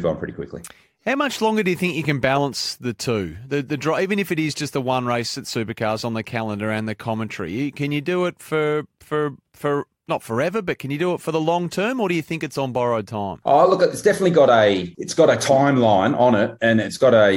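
Nothing goes wrong technically anywhere in this speech recording, so there's no fault to point to at any moment.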